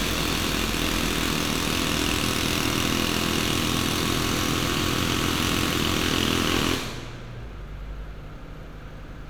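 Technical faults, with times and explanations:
No technical faults can be heard anywhere in this audio.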